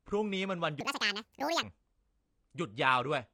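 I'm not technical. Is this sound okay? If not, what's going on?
No, there are two problems. The first is a section at the wrong speed. From about 0.81 to 1.63 seconds the speech suddenly runs about 1.83 times too fast, so it sounds rushed and chipmunk-like, jumping up nearly an octave in pitch. After that stretch it snaps back to normal. The likely cause is that bit being played back against the wrong clock, which speeds up the timing and the pitch together.

The second runs through the whole clip: AAC compression. The speech sounds dull and a bit smeared, and the crisp top end of consonants like s and t is gone. There's also a noticeable watery, fizzy edge to the sound. That's most likely from being squeezed hard into a small file, where the encoder throws away detail to save space.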